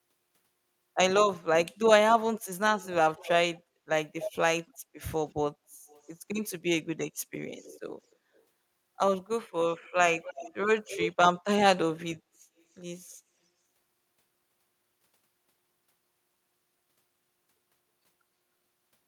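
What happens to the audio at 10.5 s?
Around 10.5 s the speech picks up a trailing double: a second copy of the voice follows about 304 ms behind, sitting roughly 10 dB under the direct sound, from 9.77 to 11.11 s. This is an echo leak. The far end was likely playing the call over a loudspeaker, and its echo canceller failed to fully strip that playback from its microphone, so the leftover was sent back down the line.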